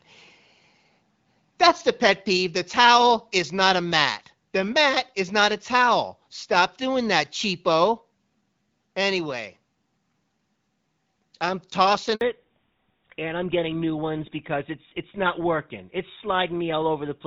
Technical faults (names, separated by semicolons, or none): handover gap; fallback to narrowband